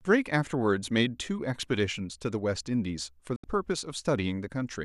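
Digital broadcast dropout, 3.36 to 3.44 s: the receiver muted on corrupted frames, fading the speech out within 3 ms and leaving a 72 ms silent gap.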